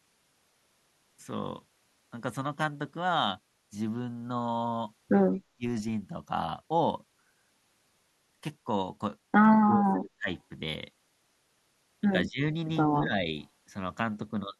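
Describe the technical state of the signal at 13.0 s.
At 13.0 s there is speech suppressed in double talk, running from 12.89 to 13.12 s. The speech level sinks by about 10 dB at its deepest, with roughly 150 ms of that span audibly pulled down. The likely cause is an echo canceller facing simultaneous talk from both ends: unable to tell this talker apart from the returning loudspeaker echo, it attenuated everything together, so the speech dips briefly.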